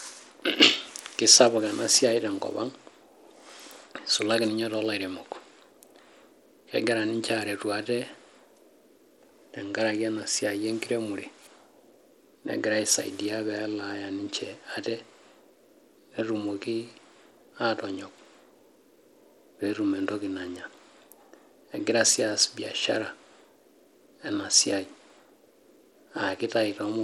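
From start to finish, a small SBC bit pool, which fits a rate near 96 kbps, likely starved the upper sub-bands: Bluetooth SBC compression. The speech's treble drops out and flickers, while coarse quantisation leaves a plainly audible gritty noise and aliasing.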